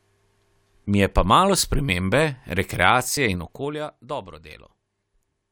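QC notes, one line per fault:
3.17 s, overlap between stream segments: a tiny skip where two stream segments meet. Their time stamps overlap, so the player treats the shared stretch as a duplicate and discards it, even though that audio was never actually repeated. A few milliseconds of speech disappear and the waveform jumps from one sample value to an unrelated one. The join fits segments 4.0 s long.
3.31 to 3.95 s, zipper noise: a fast ticking rides on the speech while its level drops by about 15 dB. The gain moves in 2 dB jumps at roughly ten per second, with no ramp between them, so each jump is a sudden discontinuity in the signal. Heard in quick succession, the clicks become a zipping texture that lasts exactly as long as the fade.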